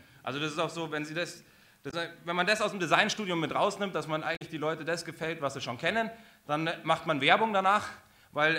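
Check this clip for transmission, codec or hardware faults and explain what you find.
There are two codec faults, both damaged data in a compressed stream, at 1.87–1.94 s and 4.33–4.42 s. Corrupted frames make the decoder misread and resync, giving brief glitches that show as broadband spectrogram smears and waveform discontinuities.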